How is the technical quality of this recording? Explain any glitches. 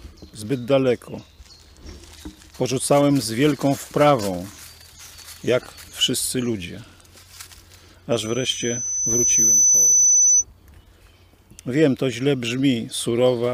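The recording has one clear fault. From 8.12 s to 10.45 s a loudspeaker feedback squeal takes over. The microphone is picking up the loudspeaker it feeds, and at 6 kHz the loop gain passes one, so that tone feeds on itself. It swells over about a second and a half into a piercing whistle a few dB louder than the rest of the sound. A spectrogram shows a bright horizontal line at 6 kHz, and the waveform envelope visibly balloons.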